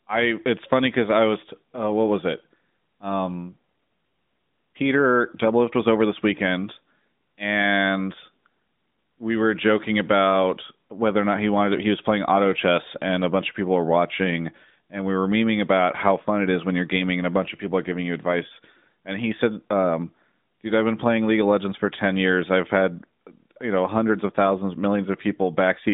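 No faults in this speech.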